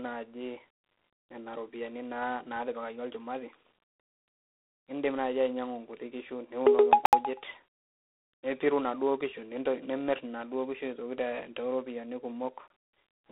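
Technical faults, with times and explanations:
Throughout: G.726 ADPCM. The speech sits in a narrow telephone band of roughly 250 Hz to 3.7 kHz, with nothing above 3.9 kHz. A harsh, rasping hiss rises and falls with the speech level, which fits 24 kbit/s: too few bits per sample to track the prediction error cleanly.
7.06–7.13 s and 12.68–12.70 s: blocks of digital silence. The audio drops straight to silence and snaps back with no fade. The first is a 70 ms hole. The second is about 23 ms, which fits a 1024-sample buffer that wasn't filled in time.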